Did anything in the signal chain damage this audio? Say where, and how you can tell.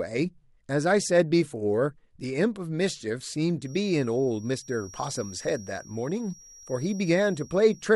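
Yes. A feedback whistle appears at 3.59 s and lasts until the clip ends at 7.95 s: a thin, steady 5.7 kHz tone sitting roughly 25 dB below the speech, swelling and fading slowly in level. The likely cause is an acoustic loop from loudspeaker back into the microphone, with loop gain hovering just under runaway at that frequency. On a spectrogram it shows as a single narrow horizontal line at 5.7 kHz; the waveform hides it beneath the speech.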